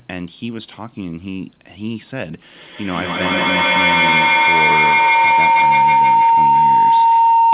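From 2.54 s to the end, a tone around 1 kHz swells, with the loop repeating roughly every 150 ms, peaking about 12 dB above the speech. This is feedback howl: two call devices share a room, and their microphone-to-loudspeaker loop gains level on each pass.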